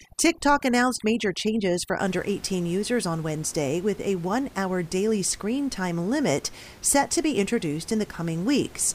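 From 0.0 to 2.0 s, overdone noise removal strips bands near the noise floor. Quiet speech vanishes with them, leaving speech over twinkling near-silence. Room noise sits about 23 dB below.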